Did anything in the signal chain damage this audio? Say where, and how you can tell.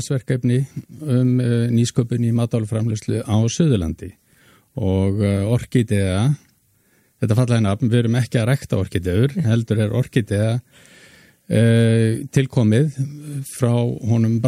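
No, nothing along the chain seems to have hurt this one, and there's no point where the sound slips, drops or changes character.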